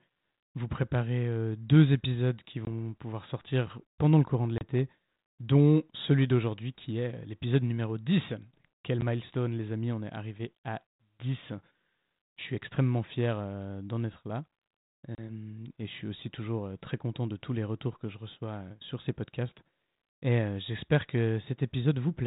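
Packet loss on an ADPCM call at 2.65 to 2.68 s, 4.58 to 4.65 s, 9.01 s and 15.15 to 15.2 s cuts hard-edged gaps of 20, 30, 10 and 30 ms. After each gap the decoder's predictor and step size are out of step with the sender's, so the speech returns with brief distortion before settling, over a narrowband sound that points to 32 kbit/s G.726.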